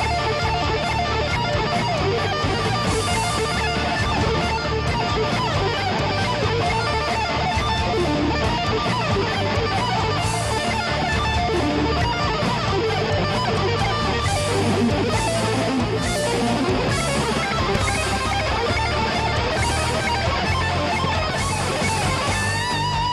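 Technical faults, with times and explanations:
17.75–17.91 s, loud pop: two sharp pops in quick succession jump out about 15 dB above the surrounding sound, which carries on underneath. A sudden voltage step or pulse, likely from a plug, switch, static discharge or driver glitch, briefly reached the signal.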